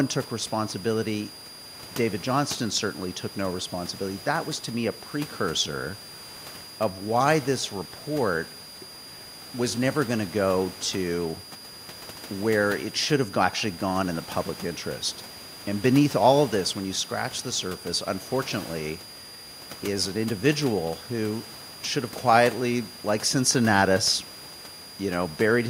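A switching supply whistle runs through the whole speech recording. A switching power supply is running in an audible burst mode or beating with another one, and its tone leaks into the audio path. It sounds like a thin, high whistle near 5 kHz. The pitch wanders between about 4.76 and 4.91 kHz as the supply's load shifts. It sits roughly 20 dB below the speech, so in pauses it sits above the quieter room noise.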